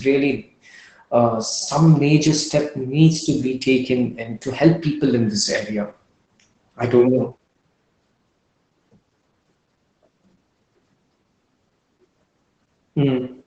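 Opus voice compression runs through the whole speech clip: nothing survives above 8.7 kHz, and the coarsely coded linear-prediction excitation leaves the voice muffled, hoarse and faintly robotic, consistent with wideband SILK coding at a low bitrate around 12 kbps.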